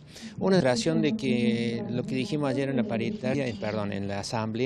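At 0.59 s and again at 3.33 s, a short chirp, click or hole cuts through the audio, each lasting under 20 ms. Both are damaged data in a compressed stream: corrupted bytes cause the decoder to misread a frame and lose sync until it finds the next valid header. On a spectrogram each shows as a thin vertical break. In the waveform it appears as a brief, abrupt discontinuity.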